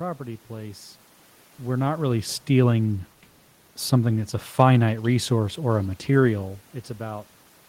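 No technical faults can be heard in the signal: the background noise belongs to the room the microphone was in, and the level changes around 1.5 s and 6.5 s come from the talker shifting position relative to the microphone rather than from anything in the system.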